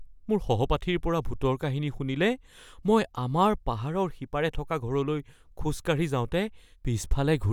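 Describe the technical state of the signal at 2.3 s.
At 2.3 s the speech signal is intact, with no audible fault at that moment.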